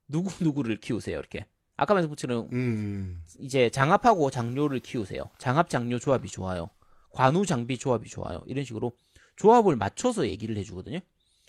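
No technical faults can be heard anywhere in this recording.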